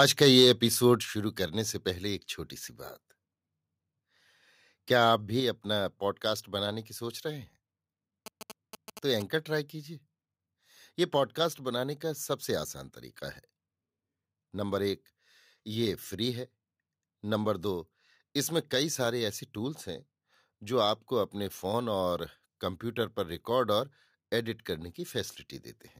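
Speech opens with microphone overload from 0 to 0.51 s. The peaks push about 3 dB past the converter's limit, and around one percent of samples are flattened, giving the loudest syllables a harsh, crackly edge. A waveform view shows those peaks sheared into flat plateaus at the rails, and a spectrogram shows broadband splatter streaking upward above each clipped onset. The likely cause is an input gain set too high, so the converter runs out of headroom. Shortly afterwards the microphone volume stepped down, first at 1.02 s by about 5 dB and again at 5.4 s by about 3 dB. Each time, voice and background noise drop together in one instant, which points to a single change in input gain rather than a fade. On a waveform the envelope falls in a clean step, and on a spectrogram every band dims at once. This is likely the call software reacting to the earlier clipping by lowering the device's input level. 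From 8.26 to 9.22 s, GSM signalling bursts add a galloping dit-dit-dit of short buzzes, around 10 dB below the speech. The spectrogram shows thin vertical lines at a 217 Hz repetition rate with harmonics stacked above, and the waveform carries regular spiky pulses. A nearby 2G phone exchanging signalling with its network is inducing the bursts, and the audio circuitry rectifies them into audible interference.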